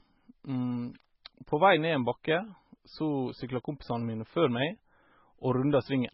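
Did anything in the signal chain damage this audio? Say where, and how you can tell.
Yes. At the codec stage, this speech is heavily damaged for its whole length, likely by MP3 compression at a very low bitrate, around 16 kbps. The spectrum stops dead at 5.6 kHz, and the remaining sound has a watery, swirling quality. A simple low-pass filter would remove the treble cleanly without those flickering, metallic-sounding gaps.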